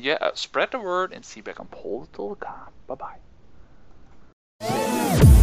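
From 1.58 s to the end of the audio, the sound turns dull and muffled, as if a blanket had been thrown over it, with the top end sloping gently away rather than cutting off sharply. This is de-emphasis applied wrongly: a treble roll-off meant to reverse pre-emphasis has been applied to audio that never had that boost, or applied a second time, leaving 10 kHz about 11 dB below 1 kHz.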